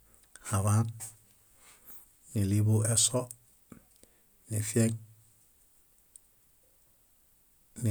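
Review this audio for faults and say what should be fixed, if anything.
No faults; nothing to fix.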